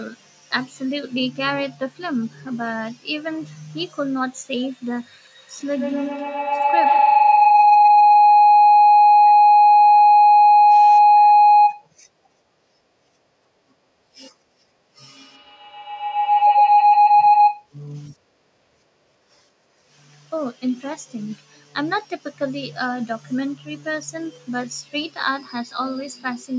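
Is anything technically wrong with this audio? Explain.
Yes. From 5.18 to 5.27 s, chunks play out of order. A 23 ms chunk arrives three chunks late, so the speech jumbles briefly.

Feedback howl follows, from 5.39 to 11.91 s and from 15.05 to 17.72 s. A microphone-to-loudspeaker loop gains level each trip, building a tone near 700 Hz, repeating about every 150 ms, and peaking about 11 dB above the speech.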